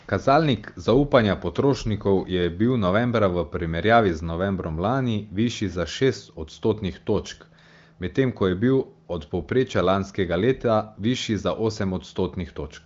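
No technical faults can be heard anywhere in the speech. It has passed through the AMR wideband (HD Voice) codec with little or no audible coding damage, and the complete absence of content above 7 kHz, together with the clarity of the speech, fits the codec's high rate of 23.05 kbit/s.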